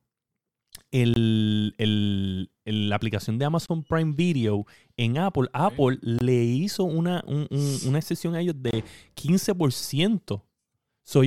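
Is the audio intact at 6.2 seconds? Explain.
No. A gap between chunks sits at 6.19 to 6.21 s: the speech was carried in 2.5 s chunks, and at this join about 23 ms of silence was inserted before the next chunk began, so nothing is lost but the sound briefly drops out.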